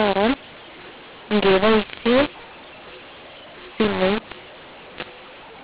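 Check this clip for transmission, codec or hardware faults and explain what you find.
There is one fault, and it runs through the whole clip: mu-law and A-law mixed up. The speech was coded with A-law and decoded as mu-law. The two logarithmic curves disagree, so sample levels come out wrong. Some are too loud, some too quiet, and near-silent samples jump upward. The speech sounds harsh and distorted, and the pauses fill with noise. The underlying telephone band still stops at 4 kHz.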